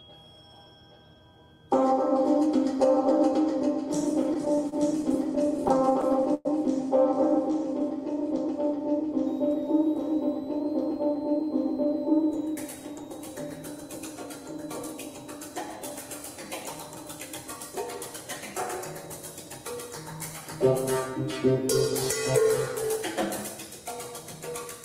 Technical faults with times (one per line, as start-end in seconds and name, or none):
4.23-6.47 repeated stalls (stutter)
9.27-24.84 switching supply whistle
10.08-13.03 jitter buffer speed-up